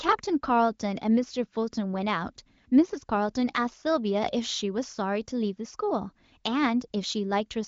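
No technical faults can be heard in this speech.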